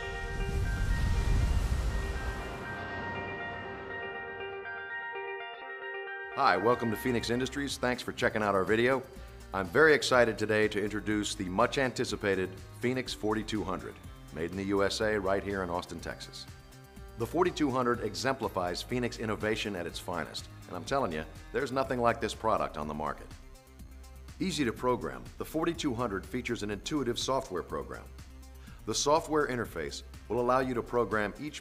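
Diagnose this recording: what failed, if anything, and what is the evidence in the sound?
Nothing in the chain seems to have failed here, since every stage passes the sound along without any audible trouble.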